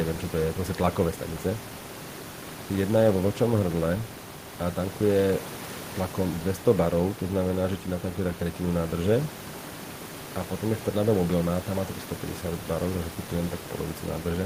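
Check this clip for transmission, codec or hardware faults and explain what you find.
Checking this clip finds no faults to explain.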